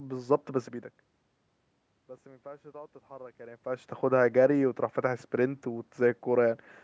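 Speech recording with no technical faults.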